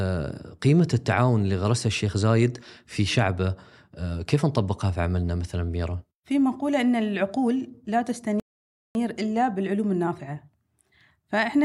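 At 8.40 s the speech halts in a rebuffering stall: the player exhausted its downloaded audio and waited for more. Silence runs until 8.95 s, adding about 0.55 s, then playback resumes exactly where it stopped, with nothing skipped or repeated.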